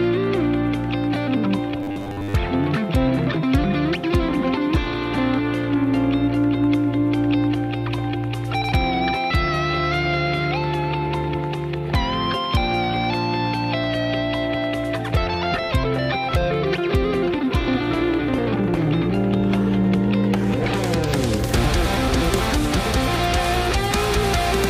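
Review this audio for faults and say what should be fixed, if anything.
Robotic sound from repeated short buffers, 1.80 to 2.34 s: a rigid 100 Hz buzz covers most of the stretch, likely from a roughly 10 ms block repeated while fresh audio arrived late. To prevent it, enlarge the playback or jitter buffer and run audio processing on a high-priority thread so new data always arrives in time.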